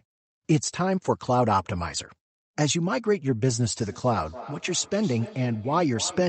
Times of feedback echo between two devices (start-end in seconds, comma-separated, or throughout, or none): 3.81-6.28